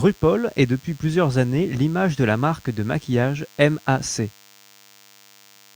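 From the first moment to the last, there's a thin, steady buzz sitting under the speech: DECT cordless phone buzz. A DECT handset or base station close by is firing short radio bursts 100 times a second, and something in the audio chain is rectifying them, so each burst turns into a click. At that rate the clicks fuse into a 100 Hz tone with a stack of harmonics. It sits roughly 30 dB below the speech.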